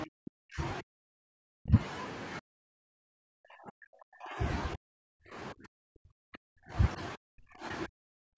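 The speech dips by about 40 dB at 0.05–0.61, 0.81–1.79, 2.4–4.39, 4.75–5.37, 5.53–6.75, 7.16–7.65 and 7.87–8.37 s. This is likely speech suppressed in double talk, where the echo canceller ducks the talker along with the far side.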